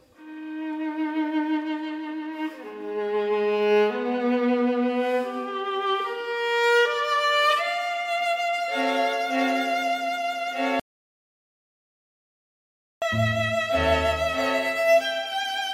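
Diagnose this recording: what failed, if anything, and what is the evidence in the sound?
An audio dropout to silence runs from 10.80 s to 13.02 s, about 2.2 s of total loss with no room tone. The input was likely disconnected or muted upstream while the recorder kept writing silence. The waveform shows a flat line, and the spectrogram a dark band.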